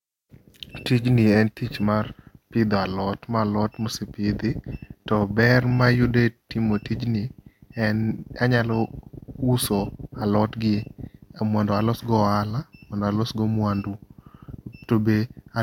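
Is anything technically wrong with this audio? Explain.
No, nothing technically wrong turns up here; it's a speech recording with no faults to point to.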